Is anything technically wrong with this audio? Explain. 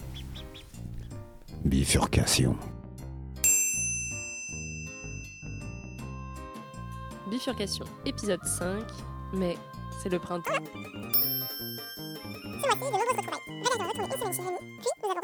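Yes. From 10.45 s to the end, the audio is read two samples at a time, which plays it at double speed. The reader takes each pair of samples as a single frame, as if the data held two channels or wider samples, so it moves through the material at 2.0 times the rate and an octave higher.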